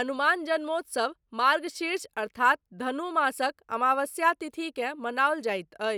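No dropouts, clipping, glitches or other technical faults can be heard anywhere in this speech recording.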